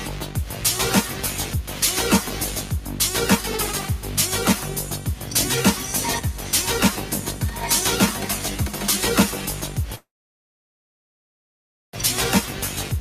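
Throughout, a noise suppressor built for speech treats sustained tones and tails as noise, pulling them down by roughly 5 dB while attacks pass. Unlike compressor pumping, the level doesn't track loudness, so the sound flutters and thins out.

From 9.95 to 11.95 s, a call audio freeze holds the sound with a brief fill and then near-silence for about 1.9 s, likely because the jitter buffer ran empty. Unlike a dropout, nothing is lost: the sound resumes exactly where it stopped, now about 2 s late.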